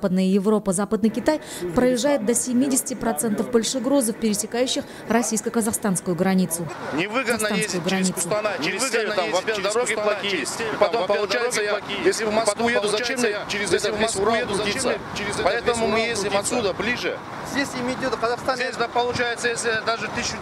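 From 7.30 s to 17.00 s the audio carries a doubled audio track: a second, full-band copy of the same sound runs about one and a half seconds behind the original, around 5 dB quieter. The trailing copy has no decay or room colouring, and it cuts in and drops out abruptly at those boundaries. The cause is likely a second capture through a slower path, or an edit that left two copies out of step.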